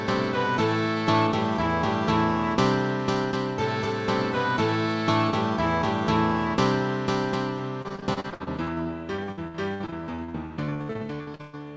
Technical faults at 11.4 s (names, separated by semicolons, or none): repeated packet loss (robotic sound)